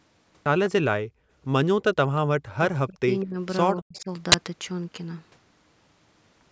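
Background gated by the echo canceller, from 1.06 to 1.3 s: while the far end was playing through the loudspeaker, the canceller clamped the microphone path hard, pulling the room sound down by about 39 dB. The ambience behind the speech falls away for roughly a fifth of a second and then comes back once the canceller releases, leaving a brief hole in the background.

Speech suppressed in double talk, first from 2.7 to 3.08 s: the speech here dips sharply, by around 40 dB at its lowest, thinning and partly vanishing for about 0.4 s. The likely cause is both sides talking at once, so the canceller could not tell the local talker apart from loudspeaker echo and turned everything down together.

Echo leak, at 3.2 to 3.24 s: a very faint, delayed copy of speech slips through, trailing the original by 197 ms and sitting far below the main level. It likely comes from the echo canceller failing to remove all of the loudspeaker sound its microphone picked up, so a scrap was sent back.

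Speech suppression in double talk returns straight after, from 3.24 to 3.37 s, with a shallower dip of about 25 dB, and again from 3.79 to 4.09 s, where the speech drops by around 40 dB for roughly 0.3 s. Inside that second stretch, another faint echo leak surfaces at 3.96 to 4.0 s, again 197 ms behind the speech.

Uninitialised buffer, from 4.32 to 4.34 s: a sudden, loud 20 ms burst of harsh digital noise cuts in. A block of audio was played before anything had been written to it, so leftover memory contents were output as samples, producing a jarring crackle that bears no relation to the surrounding sound. The call's microphone processing is also audible, with nothing above 8 kHz.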